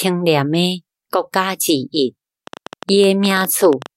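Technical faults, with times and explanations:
2.47 to 3.87 s, train of clicks: a run of around twenty similar ticks at 12.3 per second, unevenly spaced and poking a little above the speech, likely from interference from nearby gear or a faulty connection or power supply.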